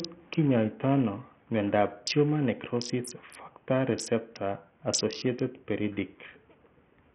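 Throughout the speech, treble flickers and drops out under a gritty, aliased haze. This points to heavy Bluetooth SBC compression, likely at a starved bitrate near 48 kbps.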